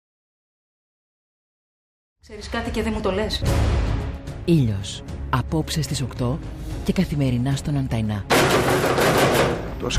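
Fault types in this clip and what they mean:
No faults present.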